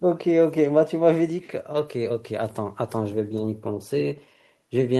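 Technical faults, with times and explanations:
No technical faults can be heard in this speech.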